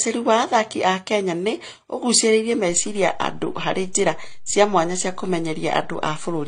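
Throughout, the speech has likely passed through two lossy encoders in sequence, which is transcoding between lossy codecs. The sound points to an MP3 stage at around 48 kbit/s later re-encoded as HE-AAC at around 24 kbit/s. Nothing remains above 9.7 kHz, and the artefacts of both stages are heard layered together.

At 2.70 s, just after "nĩ ũgucĩrĩirie", the waveform's zero line jumps to a new offset. This DC step then holds until the end of the clip. The jump lands as a single low thump, while the speech continues unchanged on top of the shifted baseline.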